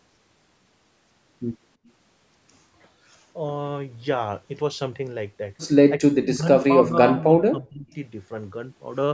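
From 6.0 to 6.48 s the speech drops sharply, by roughly 30 dB at its worst, then recovers briefly before sinking again from 6.81 to 7.87 s, this time by around 20 dB and for about a second. The pattern is likely speech suppressed in double talk, where the echo canceller couldn't tell the near talker from the far side's echo and clamped down on both. The band tops out near 8 kHz.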